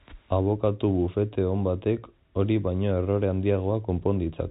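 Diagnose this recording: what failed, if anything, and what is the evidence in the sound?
Nothing failed; the telephone-band speech shows no fault anywhere.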